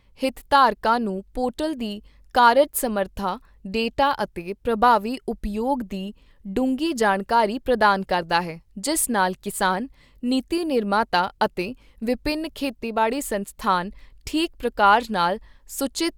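No technical faults can be heard anywhere in the speech recording, and the signal holds steady throughout.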